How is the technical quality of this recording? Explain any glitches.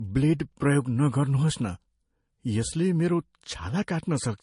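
The recording's quality is compromised throughout by stacked compression damage. Transcoding between lossy codecs runs the entire clip. Nothing is present above 10.6 kHz, and two different coding textures are audible at once. The likely cause is a low-bitrate MP3 re-encoded to Vorbis, with the second encoder spending bits on the first one's artefacts while adding its own.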